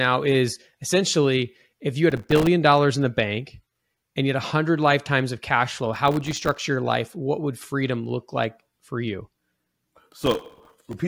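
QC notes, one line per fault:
2.10–2.47 s, processor overload crackle: the processor misses dozens of very short buffer deadlines in a row, each roughly 1.5 ms, and every missed buffer drops to silence. The hard-edged gaps stack into a gritty crackle between "essentially if you had" and "dollars in the bank".
5.94–6.62 s, processor overload crackle: the same overload returns for longer, with many tiny buffers left empty instead of filled on time. The run of abrupt silent slivers tears through the speech after "lifetimes of cash flow", clearing before "your life".
10.23–10.94 s, processor overload crackle: the longest burst, with missed deadlines piling up across the final stretch and each skipped buffer held as silence. The dense chain of sharp dropouts gives a rough, torn crackle over the speech near the end of the clip.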